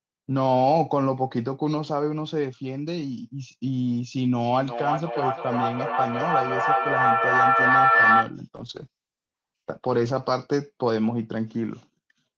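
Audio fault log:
4.36–8.39 s: feedback echo between two devices. The sound returns about every 0.4 s, reaching about 5 dB above the speech, so the repeats pile up.
8.57–10.53 s: call bitrate drop. For about 1.77 s the sound turns rough and muffled, with the top falling from 12 kHz to 8 kHz. This fits a fall from 32 to 10 kbps.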